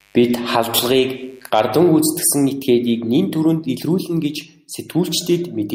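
Mains buzz runs from 0.0 to 1.5 s in this speech clip, around 35 dB below the voice. Sharp switching spikes from a dimmer, rectifier or unshielded lead arrive twice per 50 Hz cycle, spraying harmonics into the kilohertz range as a steady, raspy buzz.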